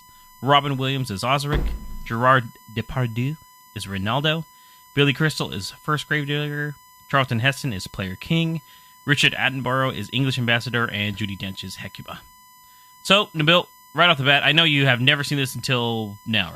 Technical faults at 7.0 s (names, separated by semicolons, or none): USB whine